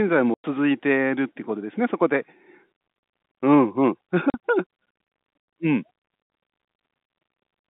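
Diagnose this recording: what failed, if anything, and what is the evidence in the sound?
Packet loss filled with silence at the network stage, with dropouts from 0.34 to 0.44 s (100 ms) and 4.30 to 4.34 s (40 ms). Missing packets were replaced by digital silence, leaving hard-edged holes in the G.711 telephone-band speech, spans that fit 20 ms packets.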